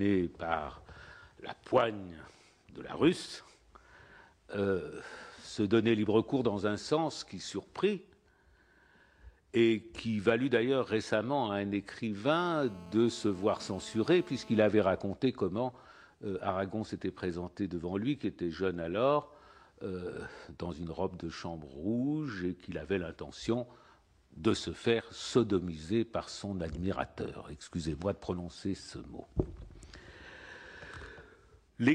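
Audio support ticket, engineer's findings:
Hard, raspy buzz with dense harmonics, 12.32 to 14.59 s, steady, about 22 dB below the signal, fixed at 217 Hz. GSM phone buzz: a nearby 2G handset on a call bursts 217 times a second, and the input stage rectifies the RF pulses.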